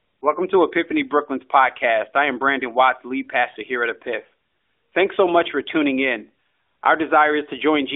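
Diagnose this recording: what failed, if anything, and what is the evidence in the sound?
Lost AMR speech frames (network): at 3.52–3.57 s, before "here at", the decoder repeats stale settings at falling gain, fitting two dropped frames; harmonics smear and dim on a spectrogram.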